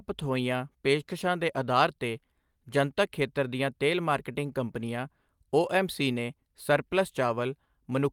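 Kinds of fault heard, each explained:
No faults turn up in this one; it's just speech running along with nothing technical getting in the way.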